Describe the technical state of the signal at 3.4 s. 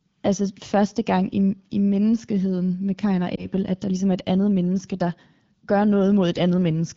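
Right at 3.4 s there's a lost AMR speech frame, with the disturbance running from about 3.36 to 3.47 s, just before "at der ligesom er". It sounds like a single 20 ms frame failed its checksum over the radio link. The decoder covered the gap by reusing the previous frame's pitch and vocal-tract settings at reduced gain, so you get a brief dip or warble rather than a full dropout, on top of the light coloration of AMR-WB at 12.65 kbit/s.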